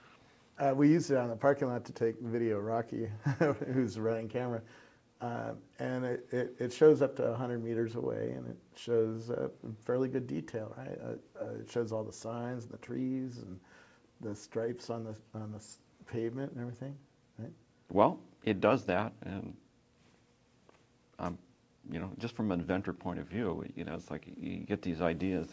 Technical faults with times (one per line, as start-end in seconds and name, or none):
none